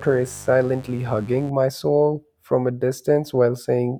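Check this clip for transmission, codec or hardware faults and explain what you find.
There is one fault: mains buzz over the first 1.5 s of the speech, stopping just before "my soul from a". It is a steady, raspy buzz sitting roughly 20 dB below the speech. Sharp switching spikes, such as those from a dimmer, a rectifier or a missing shield, leak into the signal twice per 50 Hz cycle, spreading harmonics up into the kilohertz range. The edgy, bright texture sets it apart from plain hum, which stays a smooth, low 50 Hz tone.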